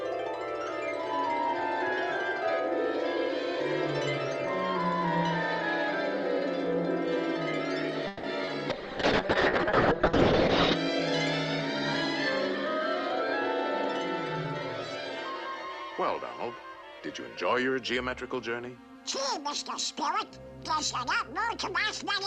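From 8.07 to 8.25 s there is a call audio freeze, likely caused by packets stalling in transit so that the jitter buffer ran dry. With nothing new to play, the receiver stretched the last sound into a fading buzz or hiss for about 160 ms. When the packets arrived, playback resumed where it had stopped, so nothing was lost, but everything after this point sits about 160 ms later.

Just after, between 8.45 and 8.49 s, there is a short concealed packet loss. About 20 ms of the stream did not reach the decoder in time, and the receiver covered the hole by extending the preceding sound before fading back into the real signal. It comes across as a brief smear or wobble, and whatever fell in that 20 ms is gone.

At 8.7 s a call bitrate drop begins. The bandwidth estimate collapsed and the encoder was pushed from 64 kbps down to 6 kbps, staying at that floor for about 2 s. At that rate the codec quantises coarsely and narrows its audio bandwidth from 20 kHz to 8 kHz, so the sound turns muffled and rough until it recovers at 10.81 s.

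From 16.57 to 18.43 s there is a jitter buffer speed-up. The buffer was holding more audio than its target, so the receiver repeatedly cut out short pitch-period-sized pieces to shed the excess, about 150 ms in total. Playback runs at roughly 107% speed with the pitch unchanged, which makes this stretch sound slightly hurried.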